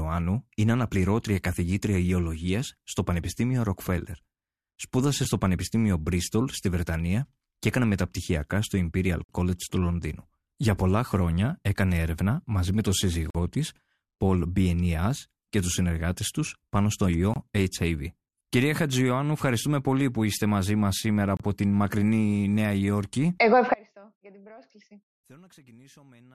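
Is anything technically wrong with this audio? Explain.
Yes, two problems. First, gaps between stream segments: short hard-edged silences at 5.25, 9.24, 13.30 (after "έρευνα μαζί με τον"), 17.34 (after "συνεργάτε του πάνω στο") and 21.37 s (before "την μακρινή"). They're roughly 4 s apart, where segment timestamps don't quite meet, so the player pads 5 to 50 ms of silence. Then from 23.74 s to the end there's an audio dropout to a faint residue, likely lost signal on a still-live path, leaving only a trace about 30 dB down.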